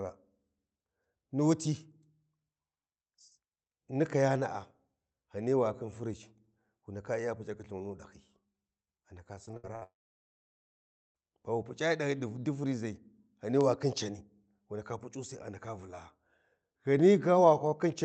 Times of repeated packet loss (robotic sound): 9.45-9.83

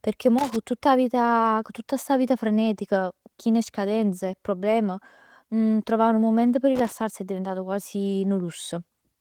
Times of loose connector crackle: 0.38-0.56, 6.75-6.92

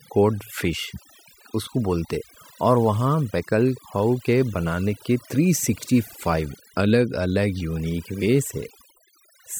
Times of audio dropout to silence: none

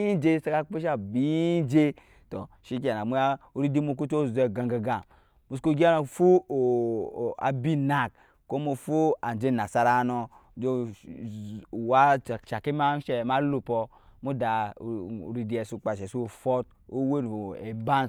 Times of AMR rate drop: none

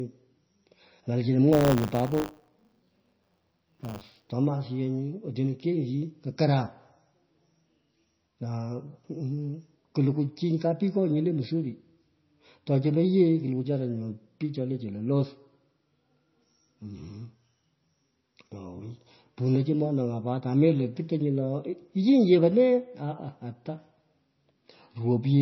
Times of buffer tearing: 1.52-4.32

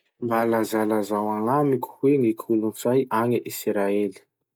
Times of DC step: none

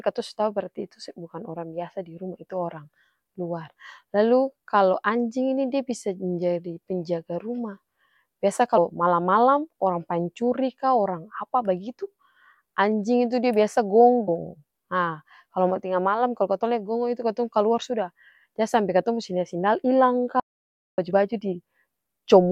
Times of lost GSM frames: none

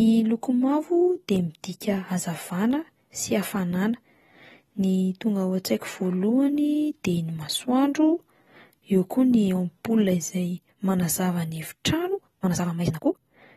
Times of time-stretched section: 12.07-13.56

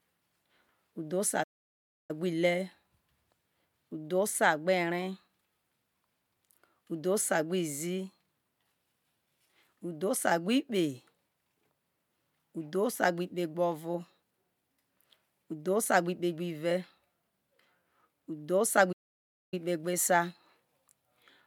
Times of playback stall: 1.43-2.11, 18.92-19.54

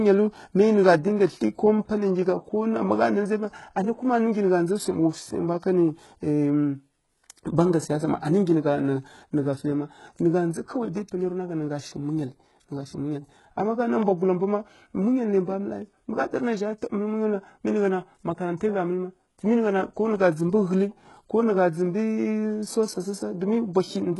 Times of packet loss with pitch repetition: none

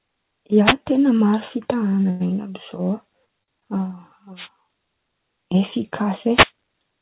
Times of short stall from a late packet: 2.10-2.28, 3.43-3.64

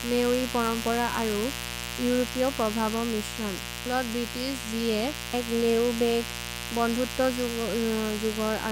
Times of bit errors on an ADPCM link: none

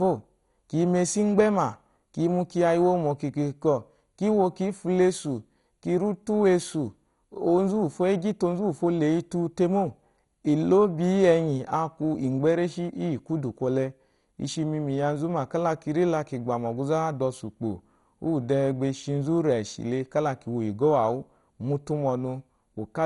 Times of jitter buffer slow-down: none

